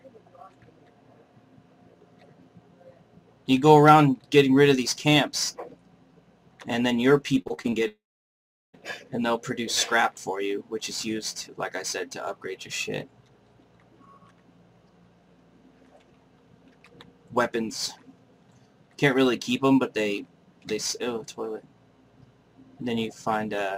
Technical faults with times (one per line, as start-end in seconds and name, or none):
7.41-7.74 repeated packet loss (robotic sound)
7.88-8.75 long network dropout